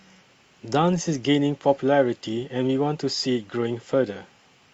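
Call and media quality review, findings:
Reviewed speech audio, no faults found, nothing to action.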